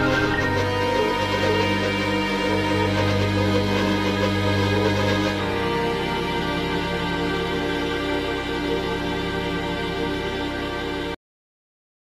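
At 11.15 s a cut-off end halts the sound mid-event: the final buffers never played, so the waveform drops to flat silence, with a blank spectrogram and no decay.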